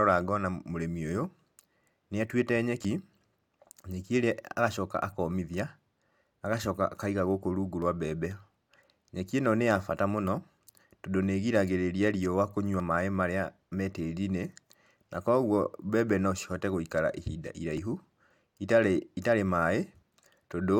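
At 2.85, 7.82 (right after "agacoka akaiga gũkũ rungu"), 12.8 and 17.78 s, the speech jumps ahead by roughly 20 ms with no gap left behind. The 5-second spacing points to the likely cause: audio missing between chunks, dropped as each chunk closed and the next opened.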